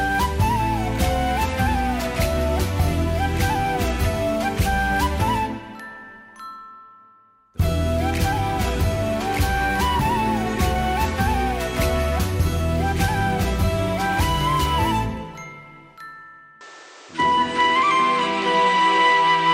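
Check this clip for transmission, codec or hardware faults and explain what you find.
One fault: from 16.61 s to the end, the sound abruptly loses its top end, with nothing above 9.1 kHz, which points to the input likely switching to a poorer device. The level shifts by roughly 5 dB, new background noise appears about 30 dB below the signal, and there is no gap at the switch. On a spectrogram, energy stops sharply at 9.1 kHz, and the waveform shows a level step.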